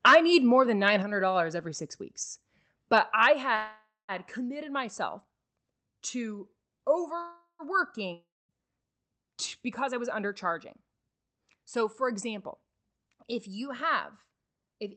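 At 1.02 s the level of the speech and the room behind it drops suddenly by about 4 dB. The cause is likely a microphone volume step-down: the call software judged the input too hot and lowered the device's input volume in a single move instead of a gradual fade. Because the change is one step, it is heard as an abrupt reduction in loudness, not a smooth ride.

From 2.97 to 3.27 s the input drives the converter about 2 dB past its limit, likely microphone overload. A small fraction of the peaks have their tops sheared flat. The result is a harsh, crackly edge on the loudest syllables. Right after, at 3.33 s, the input volume likely steps down again, this time by about 5 dB. The sound drops abruptly just past the distorted peaks.

From 3.55 to 4.12 s packets were held up in transit, and the jitter buffer ran dry. This is likely a call audio freeze. The receiver stretches the last sound into a fading buzz for 531 ms, and about 200 ms of that is silence. 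When the packets arrive, the audio resumes where it stopped, so nothing is lost but a gap has been inserted. A second freeze of the same kind runs from 7.21 to 7.62 s. It fills 386 ms, including about 110 ms of silence, and again drops no content.

From 8.13 to 8.52 s no audio arrives at all, likely a long network dropout. The receiver papers over the hole with a decaying buzz that settles into about 240 ms of silence. Unlike the freezes, roughly 360 ms of the original sound is never played. When the audio returns, it has skipped ahead past the lost part.

From 12.97 to 14.85 s the jitter buffer is holding more audio than its target, so the receiver trims it down. This jitter buffer speed-up repeatedly cuts out short chunks one or a few pitch periods long, about 150 ms in total. The speech plays at roughly 108% speed while keeping its pitch, which makes the closing stretch sound noticeably hurried.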